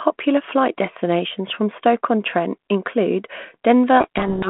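From 4.0 s to the end of the speech, a codec payload misread takes over: the G.726 code words arrive with their bit order reversed relative to what the decoder expects, so each sample's difference value is reconstructed from the wrong bits. The adaptive predictor then tracks garbage, and the speech is buried under harsh, rasping distortion. Before that point the G.726 ADPCM path, which sounds like a 32 kbit/s stream, carries the speech within a roughly 150 Hz to 3.4 kHz telephone band with only light coding roughness.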